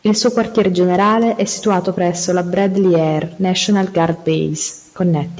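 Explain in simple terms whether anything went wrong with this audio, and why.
Nothing went wrong; it sounds like a normal call.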